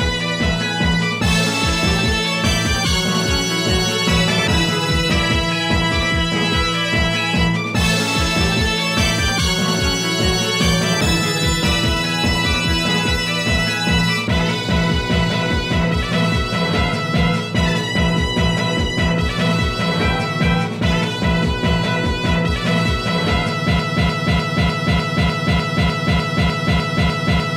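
From 23.80 s to the end, the sound falls into a broken-record loop: a 300 ms fragment repeats exactly, back to back, 13 times, replacing whatever should have played. A stalled player or stream is the likely cause. Waveform and spectrogram show identical blocks tiling evenly.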